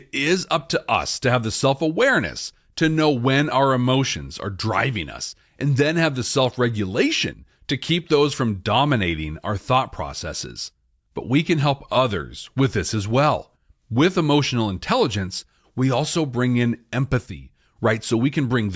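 Listening to this speech recording, nothing stood out as a technical problem at any point.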